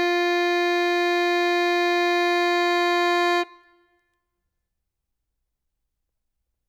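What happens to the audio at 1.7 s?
Nothing goes wrong at 1.7 s: the music plays through that moment intact, with no dropout, click or other fault.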